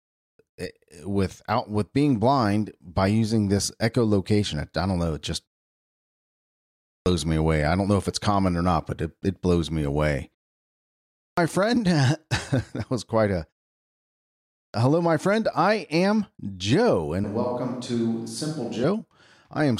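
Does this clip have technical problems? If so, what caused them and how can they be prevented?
Yes. Clipped start after a pause occurs at 6.50–7.06 s, 10.76–11.37 s and 14.16–14.74 s. Each time, the output device dozes during the preceding pause (1.1, 0.5 and 0.72 s long) and swallows roughly 0.56 to 0.61 s of speech while waking. On a waveform, speech jumps straight from flat silence to full amplitude with no onset; a spectrogram shows a hard vertical edge. Keeping the device awake, for example by disabling its power-saving idle mode, prevents this.

A switch to a distant microphone runs from 17.24 to 18.84 s, most likely because the close microphone's signal dropped out. The speech turns roomy and hollow, about 5 dB quieter and thinner in the bass, with room noise around 40 dB below the speech. The waveform shows a lower envelope, and the spectrogram shows weaker low frequencies and a raised noise floor starting and ending abruptly. 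Checking the close microphone's connection and battery before recording prevents this.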